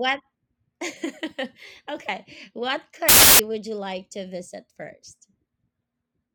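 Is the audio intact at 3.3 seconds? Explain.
No. From 3.09 to 3.39 s, just before "would you like to", the speech turns into loud, harsh broadband noise from samples built from the wrong bytes. Each sample's bytes are misassembled, so the fast-changing low bits become the large part of each value. A spectrogram shows broadband noise filling every frequency, and the waveform becomes a dense block.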